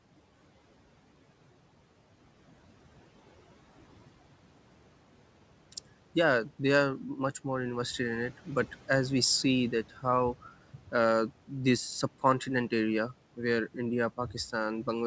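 Right after "we see that how", between 10.74 and 10.93 s, you get speech cut by the noise suppressor. The suppressor mistook a soft stretch of the speech for the room noise, which sits about 22 dB under the speech, and pulled it down with the background, by about 13 dB at the deepest point. Around a tenth of a second of that span sounds swallowed and faint before things pick up again at "this subcontinent area where".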